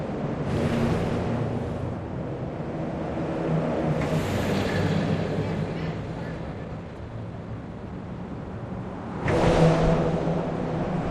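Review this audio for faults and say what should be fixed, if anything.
A jitter buffer speed-up runs from 6.03 to 7.93 s. After a burst of late packets arrived together, the receiver's buffer held more audio than its target, so it shortened playback by cutting out many small pitch-period-sized pieces in quick succession. The sound plays at about 117% speed without any pitch change, rushing through roughly a third of a second of material. Smoothing network delay variation, or spreading buffer reduction more gently over time, would prevent this.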